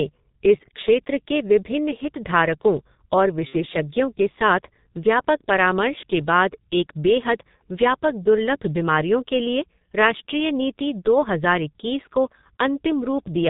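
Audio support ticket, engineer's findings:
G.723.1 codec throughout, low-rate telephony coding near 6.3 kbit/s. Band limited below 4 kHz, slow 30 ms frame updates of the vocal model. Result: muffled, hoarse speech, consonants smeared and indistinct, heavy codec damage across the whole clip.

VoIP packet loss concealed by the speech codec, 3.47 to 3.58 s. About 60 ms missing, consistent with two lost 30 ms frames. Decoder extrapolates last pitch and filter with falling gain: brief stretched, fading sound, then weakened, distorted speech while the decoder state recovers.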